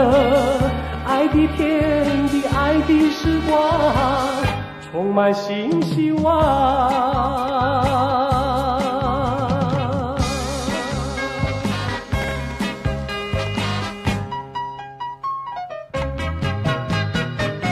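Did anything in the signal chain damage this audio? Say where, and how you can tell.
Yes. Between 12.22 and 12.65 s there is a burst of gritty crackle from processor overload at the driver or buffer stage. The processor repeatedly missed its deadlines for very short buffers of a few milliseconds each. In about seven places, a stale buffer of old audio replayed with hard edges. On a spectrogram this shows as a cluster of thin vertical broadband streaks. The waveform shows small discontinuities and repeated snippets that stop when the load clears.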